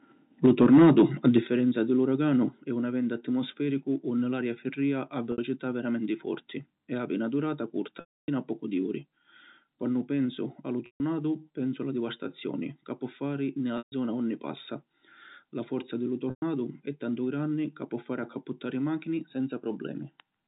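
Microphone overload runs from 0.45 to 1.38 s in this telephone speech recording. Peaks push about 4 dB past the converter's ceiling, so roughly 7 percent of the waveform has its tops sheared flat. That gives the loudest syllables a harsh, crackly edge, most likely because the microphone input gain was set too high. Microphone volume stepped down can be heard at 0.46 s (about 3 dB), 1.47 s (about 8 dB), 2.49 s (about 4 dB, between "di l’" and "è un eventu atmosfericu") and 10.26 s (about 2 dB). Each time, voice and background fall together in one abrupt step. The likely cause is the call software cutting the device's input level. Packet loss with pitch repetition appears at 5.32 s (60 ms, between "unni l’aria firrìa a" and "veramenti forti"), 8.0 s (280 ms), 10.86 s (140 ms), 13.78 s (140 ms, between "ca pò fari ni" and "unni passa") and 16.3 s (120 ms). The receiver fills each gap by looping the last pitch period and fading it out. 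The 60 ms gap comes across as a brief buzzy hold. The longer gaps decay into silence before speech cross-fades back in, and the 280 ms dropout is consistent with around fourteen 20 ms packets going missing. Throughout, the G.711 telephone coding limits the audio to below 4 kHz.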